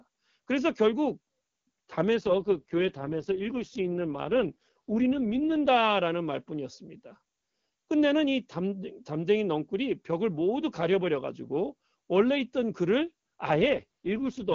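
From 2.16 to 5.68 s, and again from 13.54 s to the end, the speech turns rough and synthetic with no gap or band change, a classic AMR rate drop. It sounds like the link fell from 23.85 to 6.6 kbit/s, trading detail for error protection.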